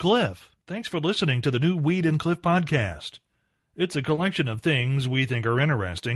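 At 4.15 to 4.19 s there is a short concealed packet loss. About 20 ms of the speech never arrived at the decoder in time. The receiver covered the gap with about 20 ms of invented sound, extending what came just before it. It then blended back into the real signal. The result is a brief smear in the speech, lasting only a few hundredths of a second.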